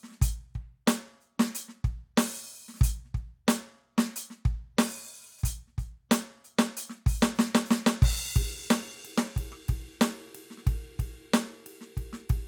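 Nothing in the music signal points to a technical fault at any moment in the recording.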